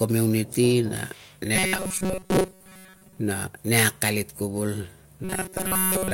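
Robotic sound from repeated short buffers runs from 1.56 to 3.19 s and again from 5.24 s to the end. The speech becomes a rigid metallic buzz at 188 Hz, most likely from a roughly 5.3 ms chunk replayed in place of most of the missing audio.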